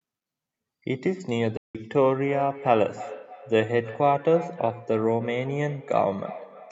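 At 1.57 s the speech cuts to silence for about 0.17 s, resuming at 1.75 s as though it had kept running underneath. This is a Bluetooth dropout, likely caused by audio packets reaching the headphones too late and being discarded, leaving a hole until good data arrived.

From 2.22 s to the end, each phrase returns as a thin, ringing copy roughly a third of a second later, peaking about 15 dB below the speech. This is feedback echo between two devices: one device replays the other's microphone feed, which that microphone picks up again, beyond the reach of either echo canceller.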